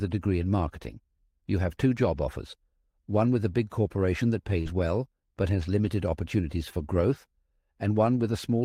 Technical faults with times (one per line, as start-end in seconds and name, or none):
4.61-4.68 short concealed packet loss
4.66-4.68 lost packet rebuilt from error correction
5.84-5.90 lost packet rebuilt from error correction